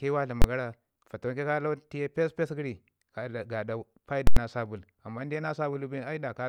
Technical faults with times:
0.42-0.44 invalid numbers at full scale
4.27-4.37 invalid numbers at full scale

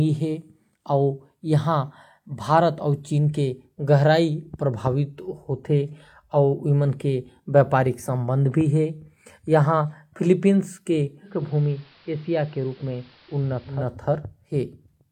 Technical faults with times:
11.22-13.94 digital radio blending to analogue

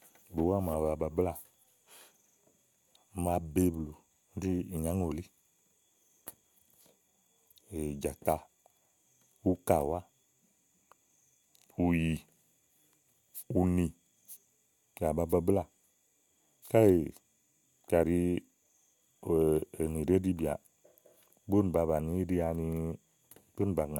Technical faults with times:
none

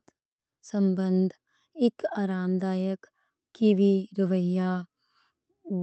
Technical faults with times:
0.00-5.83 clock drift between sender and receiver
0.04-5.81 repeated timing corrections

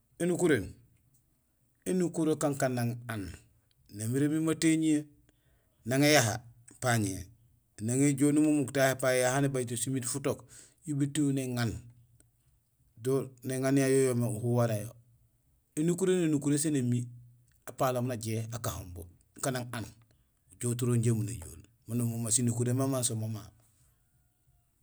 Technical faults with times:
none

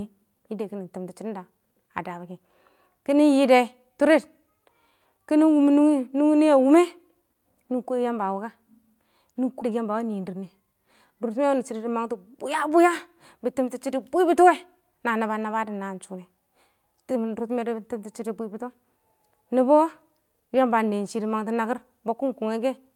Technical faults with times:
9.61 skip ahead
9.70-11.11 jitter buffer speed-up

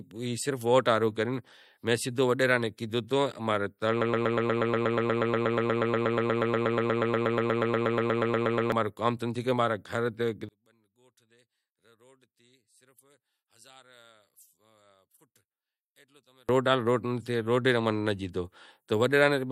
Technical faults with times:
4.01-8.72 broken-record loop
10.49-16.49 one channel inverted

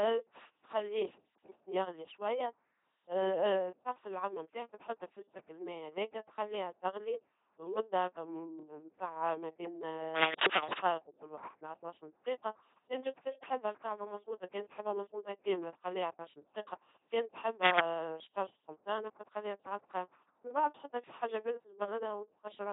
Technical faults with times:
0.00-22.73 LPC-10 vocoder

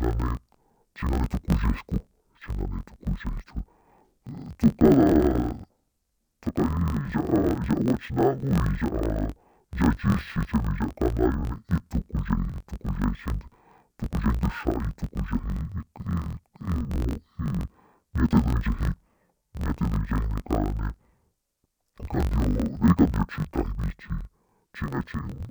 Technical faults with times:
0.00-25.50 interleaved audio read as planar

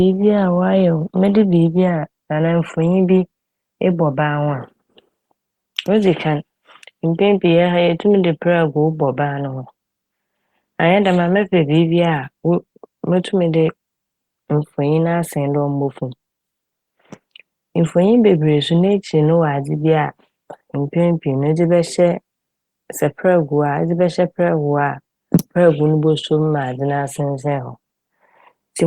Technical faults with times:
none

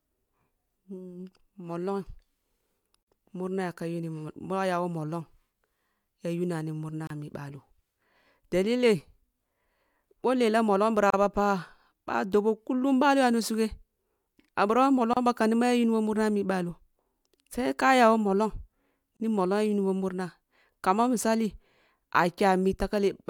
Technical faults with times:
3.03-3.07 gap at a join of encoded pieces
7.07-7.10 gap at a join of encoded pieces
11.10-11.13 gap at a join of encoded pieces
15.13-15.17 gap at a join of encoded pieces
19.17-19.20 gap at a join of encoded pieces

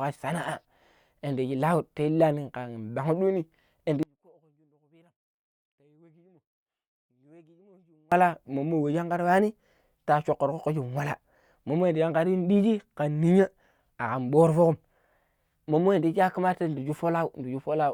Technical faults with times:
4.03-8.12 one channel inverted

